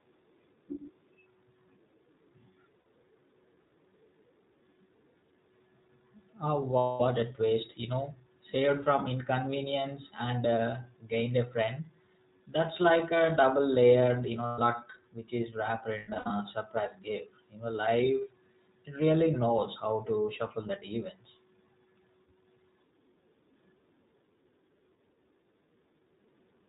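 The whole recording carries the iLBC codec. The band stops at 4 kHz, so sibilants are dull, and the speech has a plainly audible rough, synthetic grain. The 20 ms framing fits iLBC's 15.2 kbps mode. A wideband codec would keep the brightness, and a low-bitrate CELP coder smears differently. Here the roughness is evenly spread and frame-local, with no slow, warbling drift carried from one frame to the next.

Lost iLBC frames then break in four times. The first is at 2.80–2.86 s and lasts 60 ms, which points to three frames. The second runs 6.78–7.02 s, about 220 ms, just before "a twist". The third is at 14.46–14.60 s, 120 ms long, between "a double layered you" and "which is wrapped". The last follows "which is wrapped" at 15.98–16.32 s and ends before "surprise gift". Its losses are scattered over 320 ms, with the longest unbroken stretch around a tenth of a second.

In each case the decoder fills the hole by repeating the last pitch cycle with noise mixed in. 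The gap sounds like a held, buzzy vowel that fades over the longer losses, not silence or a click. Because iLBC frames are coded independently, the voice snaps back almost immediately. Codecs that depend on earlier frames instead take a moment to recover.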